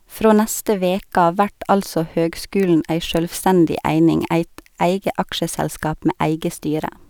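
No technical faults can be heard anywhere in the recording, and the signal stays steady and intact throughout.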